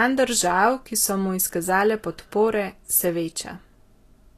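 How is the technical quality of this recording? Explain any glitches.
The technical quality is reduced by audible compression damage that runs through the whole clip. Nothing is present above 14.2 kHz. The treble sounds hissy and grainy, and consonant attacks are blurred. This is likely Vorbis compression at a low setting, which fits a bitrate near 37 kbps. The codec keeps a smooth spectral outline but quantises the high-frequency detail so coarsely that it turns into noise of similar energy.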